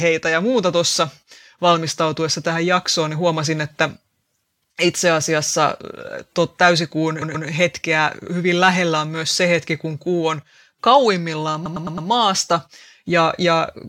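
At 7.21 s, just after "tuo täysikuun", a block of about 128 ms plays three times in a row before "hetkeä hyvin lähellä on", a stutter from repeated frames. A run of compressed frames was delivered more than once, so the decoder replays the same audio and the clip grows by 0.26 s. At 11.65 s, after "kun kuu on kauimmillaan", a 107 ms block repeats four extra times, adding 0.43 s.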